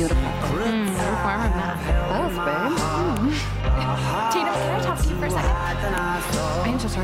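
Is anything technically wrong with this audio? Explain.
Yes. File header played as audio: sharp, loud clicks at 0.88, 3.17 and 5.98 s, where joined pieces kept their WAV headers and those bytes play as samples.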